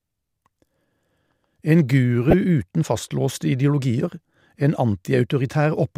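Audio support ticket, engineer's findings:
Brief loud glitch, 2.31–2.33 s in the speech. Corrupt frame decoded: bit errors in a couple of compressed frames, decoder played misread gains at wrong frequencies.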